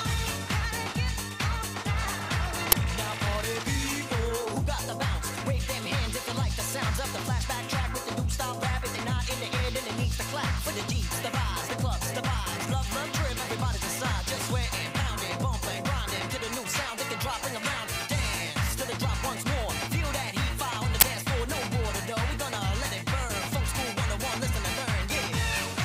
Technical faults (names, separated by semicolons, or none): uninitialised buffer